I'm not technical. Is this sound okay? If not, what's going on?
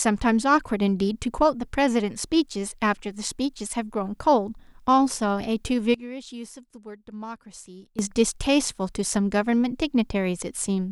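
No. Somewhere in the recording chain, the volume setting was likely changed instantly, with no gradual fade, which is called a sudden gain jump. At 5.94 seconds the speech abruptly becomes much quieter, and the background noise drops along with it, as if someone had yanked a volume knob down. At 7.99 seconds both snap back up to their earlier level just as suddenly.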